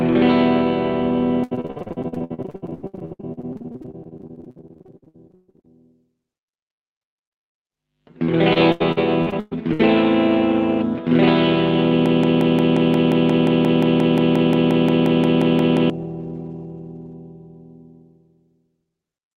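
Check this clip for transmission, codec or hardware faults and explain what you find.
Two kinds of trouble turn up here, both over a call path running Opus with the top end rolled off around 8 kHz.

Repeated packet loss (robotic sound) hits from 1.43 to 5.70 s and again from 8.53 to 9.81 s. Dozens of dropouts get patched by stretching the last sound, so it turns choppy and robotic, with gaps up to 130 ms.

Then a broken-record loop runs from 12.06 to 15.90 s. A 0.18 s fragment repeats 22 times back to back, likely from a stalled stream resending its last chunk.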